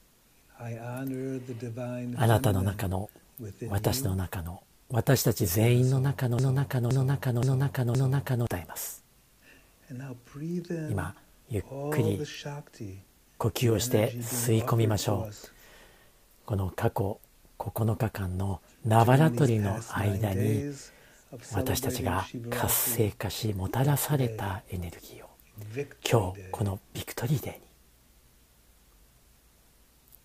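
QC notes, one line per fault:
6.39–8.47 s, broken-record loop: a fragment of about 0.52 s repeats exactly four times back to back, filling roughly 2.1 s before normal playback resumes. The likely cause is a player, encoder or stream that stalled and kept resending the last chunk it held, so the sound that belonged in that stretch never arrives. Because each pass is identical and the joins fall at a fixed period, it is set apart from a stutter or echo, which would not replay a whole half-second piece unchanged.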